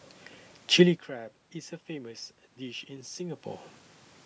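Nothing's actually wrong with this bit of speech; the level dips and rises a couple of times just because the talker shifts around, and the room background is simply part of the recording.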